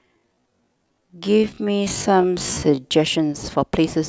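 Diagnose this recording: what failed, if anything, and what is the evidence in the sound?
The first 2.86 s, from 0.00 s, are a time-stretched section, with the speech slowed to half speed (0.5x) while its pitch holds steady. That section drags, and the pace jumps abruptly to normal at 2.86 s. On a spectrogram, harmonics sit at their usual frequencies but every feature is drawn out twice as wide, and the waveform shows short grains repeated back to back. The likely cause is a software stretch in editing or playback processing that repeats short pieces to fill the length.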